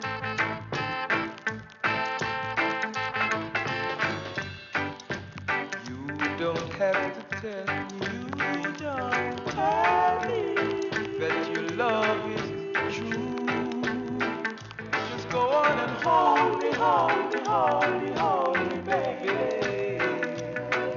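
No technical faults can be heard in this audio: the signal carries no dropouts, clicks, distortion, level jumps or other disturbances at any point.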